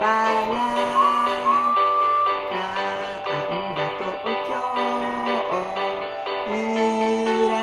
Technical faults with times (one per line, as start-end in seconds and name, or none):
none